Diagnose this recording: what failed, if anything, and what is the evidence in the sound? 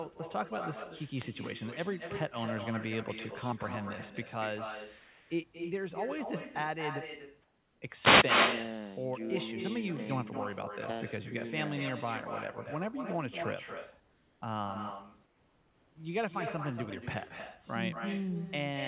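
Echo with no canceller, a call-processing failure at the far end: throughout, every phrase returns roughly a fifth of a second later at about 6 dB down, thinner. On a spectrogram each syllable has a fainter, smeared twin displaced along the time axis.

Wireless microphone noise hits, in the analogue radio link: short static bursts at 1.12–1.30 s and 8.00–8.27 s, where the FM signal faded and receiver noise broke through. The spectrogram shows broadband vertical smears, and the waveform shows brief ragged noise spikes over the speech envelope.

Comfort noise in place of the background, likely from discontinuous transmission in the call codec: at 5.0–5.3 s, 7.42–7.82 s, 14.0–14.42 s and 15.26–15.96 s the room background turns into a steady, featureless hiss, at the same level or up to about 3 dB quieter. A spectrogram shows flat, textureless noise blocks.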